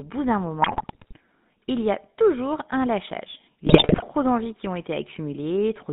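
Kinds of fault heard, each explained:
GSM full-rate codec: The speech passes through an early mobile-phone coder that models the vocal tract and excites it with a sparse, regularly spaced pulse train, which fits a 13 kbps stream. The result is a buzzy, gravelly roughness across the whole clip, plainly audible. On a spectrogram the energy sits between about 150 Hz and 3.7 kHz, with nothing above and a coarse, smeared harmonic structure rather than clean, fine pitch lines.
GSM bit errors: Corrupted bits reach the decoder, so filter, pitch and gain values come out wrong and individual frames are rebuilt with distorted spectra or sudden level jumps. The speech breaks into squawks, pops and gargling from 0.62 to 1.16 s and again, more severely, from 3.66 to 4.03 s. On a waveform these stretches show abrupt amplitude spikes, and a spectrogram shows blotchy, misplaced bands that change from frame to frame.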